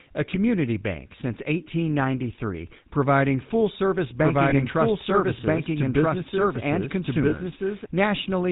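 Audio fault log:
Throughout: GSM full-rate codec. The speech has that plainly buzzy, gravelly roughness of the old 13 kbps GSM coder. It rebuilds the voice from a vocal-tract model fed by sparse, evenly spaced pulses, and with nothing getting through above 4 kHz the top end sounds dull and boxy.
4.20 to 7.86 s: doubled audio track. Right after "providing full service" a second full-band copy of the speech jumps in at about the same level, trailing by roughly a second and a half. It's dry, with no room tail, and switches on and off abruptly. It's likely a second capture path running late, or a misaligned edit.
4.50 s and 7.30 s: lost GSM frames. Each time a single 20 ms frame went missing just after "providing full service" and again later. The decoder filled the gap by repeating the last good frame's settings, which is why you hear a brief rough, metallic ring instead of a clean dropout.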